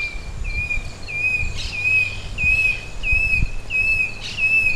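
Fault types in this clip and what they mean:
No technical faults are audible.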